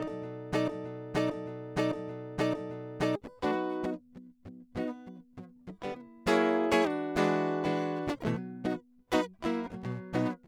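A broken-record loop interrupts this music clip from 0.68 s to 3.16 s: a fragment about 0.62 s long plays four times in a row, each repeat identical and butted directly against the next, so the passage stutters in place instead of moving forward. The cause is likely a stall in the player, encoder or stream that kept resending its last held fragment, and the music that belonged in those 2.5 seconds is missing.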